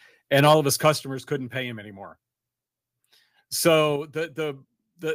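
From 0.85 to 0.90 s the loudest peaks flatten and take on a harsh, crackling edge. This is microphone overload. The input was likely set too high, so the waveform tops hit the converter's ceiling and were cut off. The peaks run about 2 dB past that limit. Only a small share of samples is clipped. The distortion is brief but gritty.

At 1.02 s the speech and the background drop together, suddenly, by about 6 dB. This sounds like the microphone volume stepped down. Likely, the call software heard the clipped peak just before and cut the device's input gain in one move. It happens again at 3.96 s, a drop of about 5 dB. Each change is instant, with no fade. The level then holds lower.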